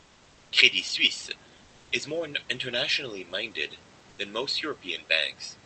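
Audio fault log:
0.0–0.51 s, comfort noise in place of the background: the opening hiss is steady, featureless and about 3 dB quieter than the real room noise after it. This is likely discontinuous transmission, with the sender idle in silence and the receiver filling in shaped synthetic noise.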